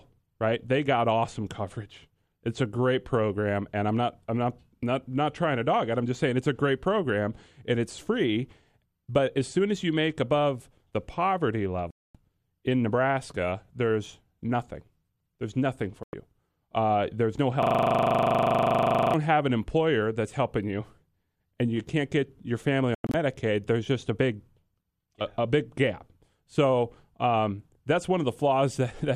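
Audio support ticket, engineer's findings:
Speech cuts to silence at 11.91–12.15 s (about 240 ms), 16.03–16.14 s (about 96 ms), and 22.95–23.14 s (short holes, longest about 96 ms). Digital broadcast dropout: the receiver muted on lost or checksum-failed frames, consistent with 24 ms frames. The missing audio is gone, not delayed.

Steady 25 Hz buzz from 17.63 to 19.14 s, one 40 ms fragment repeating about 38 times. System hang loop: the host or driver stalled while the audio hardware kept replaying the same ring-buffer segment.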